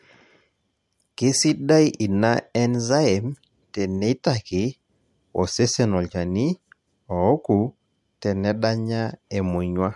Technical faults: none

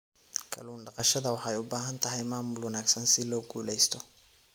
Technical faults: sudden gain jump

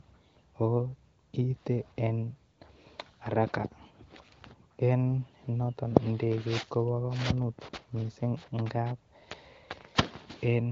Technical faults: none

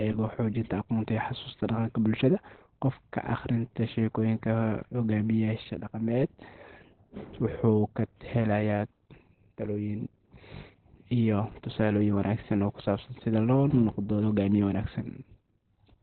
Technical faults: Opus compression

